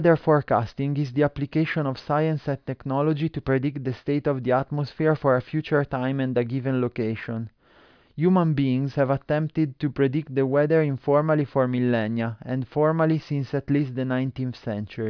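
No audible faults in this speech.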